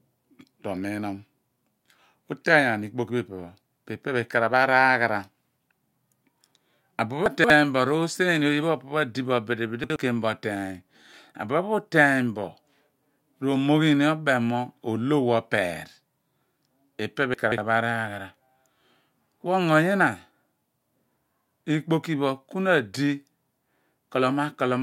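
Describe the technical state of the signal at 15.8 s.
At 15.8 s the speech signal is intact, with no fault audible at that point.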